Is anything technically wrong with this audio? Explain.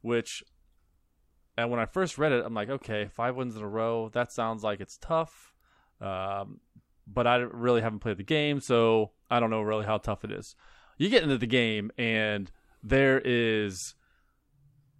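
No, nothing technically wrong can be heard in this speech clip. Nothing in it points to a problem in how the audio was captured, processed or played back.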